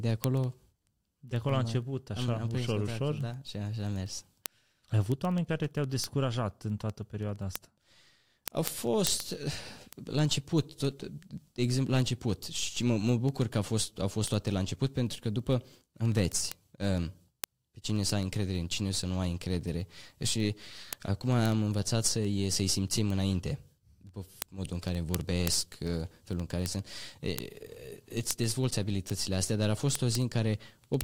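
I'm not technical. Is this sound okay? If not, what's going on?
No. Two digital devices run on separate, unsynchronised clocks, so samples keep slipping. These word clock ticks click about fourteen times a second, from 0.11 to 31.01 s.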